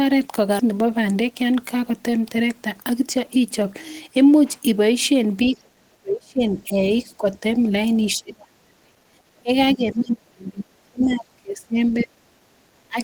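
Skip ahead at 0.59 to 0.61 s: playback jumps forward with no gap, and roughly 0.7 s of speech is simply gone. The two sides are butted together almost directly. Audio that was already waiting was discarded, either in transit or by the jitter buffer overflowing, so the delay drops by about that same 0.7 s and the speech lurches on mid-flow.

Jitter buffer speed-up follows from 0.71 to 1.91 s, running at 107% speed, and again from 2.58 to 3.61 s at 105%. The buffer was holding more audio than its target, so the receiver trimmed many short pitch-period slices in a row. That removes about a tenth of a second in the first stretch and a little less in the second. Pitch stays put, but the speech sounds rushed.

Speech suppressed in double talk comes next, from 5.45 to 6.90 s. The voice sinks by up to about 40 dB, falling away almost entirely. This is likely the echo canceller, with both sides talking at once, failing to tell the talker from the loudspeaker echo and clamping down on everything. 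A milder dip of about 10 dB follows from 7.09 to 7.44 s, with the same likely cause.

Inside that dip, at 7.34 to 7.38 s, the other side's voice leaks through as a brief scrap about 35 dB below the speech. This is likely residual loudspeaker echo that the canceller did not fully remove from the microphone.

Speech suppressed in double talk returns from 8.16 to 9.51 s, with drops of up to about 35 dB. It comes back from 9.75 to 12.32 s, dropping up to about 30 dB. In each case the likely cause is again simultaneous talk defeating the echo canceller.

Within that last span, the other side's voice leaking through is clearer at 11.04 to 11.19 s. It arrives as a fragment about 20 dB under the speech, likely echo left uncancelled.

Background gated by the echo canceller at 12.47 to 12.58 s makes the room sound dip by about 10 dB for roughly a tenth of a second. The microphone was pulled down hard while the loudspeaker played, and the room sound returns when the canceller releases.

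Finally, speech suppressed in double talk at 12.88 to 12.98 s produces a quick dip of about 20 dB, likely the canceller reacting to overlapping talk once more.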